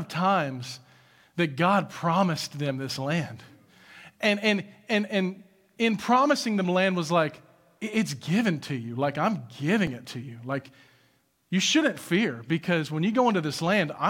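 At 9.87 s, just before "it to you", the speech jumps with no silence. This is likely a dropped buffer (overrun), where under two milliseconds were overwritten before capture. An underrun would instead leave a gap or repeat.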